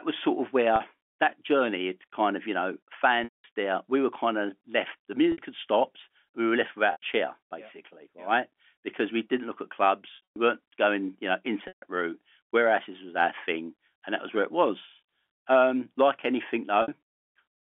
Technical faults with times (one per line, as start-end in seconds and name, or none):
0.76-0.80 packet loss with pitch repetition
3.24-3.44 packet loss with pitch repetition
5.32-5.38 packet loss with pitch repetition
6.92-7.02 packet loss with pitch repetition
10.16-10.36 packet loss with pitch repetition
11.68-11.82 packet loss with pitch repetition
16.82-16.88 packet loss with pitch repetition